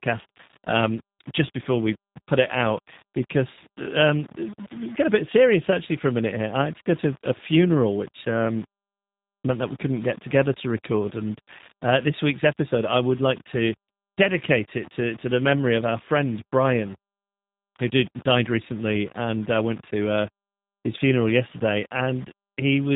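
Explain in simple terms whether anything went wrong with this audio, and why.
Two problems run through the whole speech recording, from start to finish.

The speech has a gritty, grainy edge that shifts with each sound, worst in quiet parts. The likely cause is low bit depth without dither, storing the sound too coarsely.

The sound is also thin and a bit robotic, with nothing above about 3.8 kHz. That is the G.729 codec, a phone-call format that rebuilds speech cheaply.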